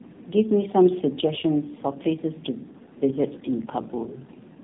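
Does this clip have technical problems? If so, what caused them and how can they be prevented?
Yes. Tandem speech coding runs throughout: the speech sounds coded twice by narrowband AMR, which fits roughly 5.9 and then 10.2 kbit/s with a G.711 mu-law hop between. Each coder re-encodes the previous one's damage, leaving it rough, muffled and warbly, with nothing above 3.8 kHz. Preventing it means keeping one codec end to end with transcoder-free operation, so the speech is encoded only once.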